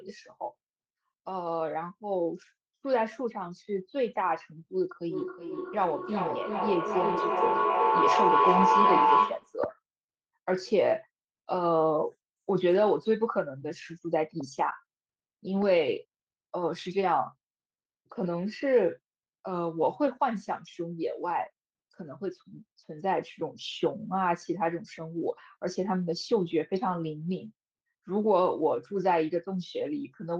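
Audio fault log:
5.07–9.59 s, feedback echo between two devices. Each word returns about every 400 ms, thinner and more ringing with each pass. A second device in the room is on the same call and replays this microphone's sound. The microphone picks that up again, and the echo canceller only removes its own device's output. The loop is strong here. The repeats build up instead of dying away, peaking about 4 dB above the speech.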